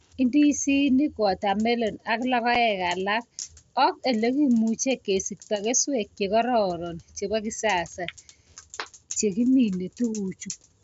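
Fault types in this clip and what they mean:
Unconcealed Bluetooth headset packet loss: One voice packet travelling between headset and phone was lost. Nothing was generated to hide the gap. At 2.55 s the speech drops out for 7.5 ms, which fits a single lost frame. The hole starts and stops abruptly. The wideband mSBC link carries the speech up to 8 kHz on either side of the gap.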